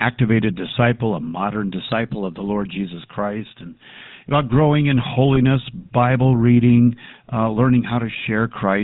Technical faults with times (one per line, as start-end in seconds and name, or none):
0.00-8.83 GSM full-rate codec
5.35-5.38 lost GSM frames